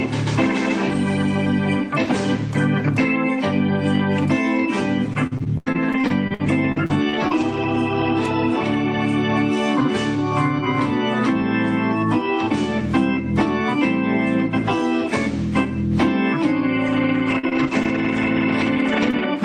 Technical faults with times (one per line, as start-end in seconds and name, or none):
5.13-7.76 repeated packet loss (robotic sound)
16.86-19.24 scattered short gaps